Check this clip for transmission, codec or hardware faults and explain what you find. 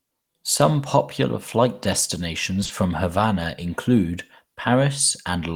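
One transmission fault appears: short concealed packet loss, at 2.63 to 2.67 s and again at 2.67 to 2.71 s. Back-to-back 20 ms gaps were filled by extending the preceding speech, leaving a brief smear.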